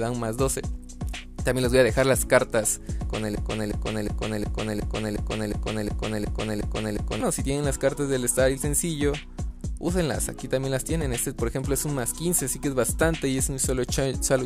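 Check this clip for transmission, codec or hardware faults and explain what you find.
There's one fault here. From 3.35 to 7.21 s a 362 ms fragment repeats eleven times back to back, a broken-record loop, likely a stalled player or stream replaying its last buffer.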